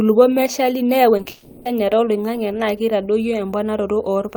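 A speech recording with two network-related faults clustered near the 1.2 s mark. Short concealed packet loss occurs twice back to back, at 1.17–1.21 s and 1.21–1.27 s, where about 20 ms and then 40 ms of audio never arrived and the decoder extended the preceding sound to cover each gap, leaving a brief smeared, wobbling patch. Immediately after, from 1.29 to 1.67 s, the sound turns into a fading synthetic buzz or hiss lasting roughly 360 ms and never drops fully to silence before normal audio resumes further on. This is likely a long network dropout in which concealment filled the entire gap and the real content for that span was lost.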